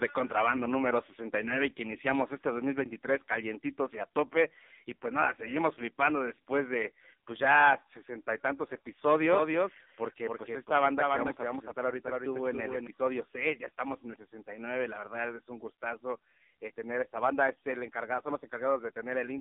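From start to finish the speech sounds thin, boxy and buzzy, with a synthetic, metallic edge. Nothing survives above about 3.7 kHz, and the low end thins out below roughly 200 Hz. This is heavy AMR narrowband mobile codec damage. The speech was squeezed into a telephone band and rebuilt from a crude vocal-tract model driven by sparse pulses every few milliseconds. The coarseness points to one of AMR-NB's lowest modes, around 5.9 kbps.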